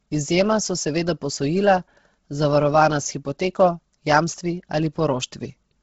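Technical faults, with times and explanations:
Throughout, Bluetooth LC3 compression, likely: the encoder seems starved of bits, pointing to a rate near 16 kbps, so it discards much of the upper spectrum and patches gaps with noise, leaving the speech heavily damaged, breathy and grainy, with nothing above 7.8 kHz.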